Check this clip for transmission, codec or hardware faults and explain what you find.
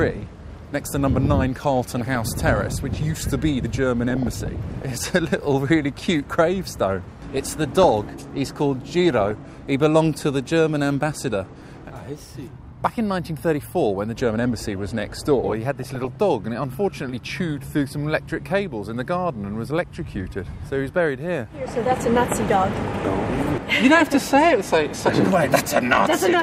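DAB burbling, from weak digital radio reception, appears in five bursts: 1.94–2.62 s, 4.10–5.10 s, 7.37–8.01 s, 9.11–9.31 s and 15.79–16.16 s. Bit errors, at a rate well under one percent, slip past error correction into the MP2 data. Corrupted samples put short blips of noise into single sub-bands, and corrupted scale factors, where they get through, make sub-bands leap in level for up to a frame. The result is a burbling of short noise blips laid over the sound, longest in the burst around 4 to 5 s.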